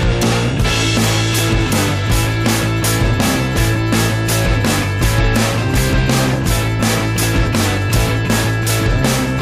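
Two loud pops come through, from 1.66 to 1.69 s and again from 2.83 to 2.85 s, each a single sharp hit a few decibels above the sound, which carries on underneath. Each is likely a brief voltage spike, like a switch click or static discharge, landing on the signal.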